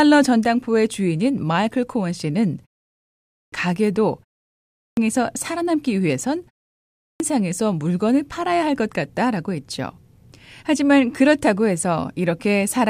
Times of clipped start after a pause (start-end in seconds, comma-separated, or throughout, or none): 3.00-3.52, 4.53-4.97, 6.73-7.20